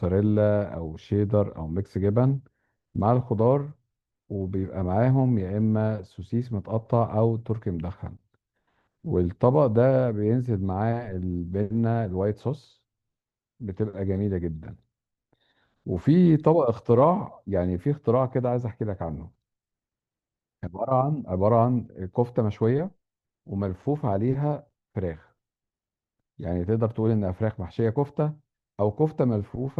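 Nothing in the speech recording stood out as a technical fault on listening.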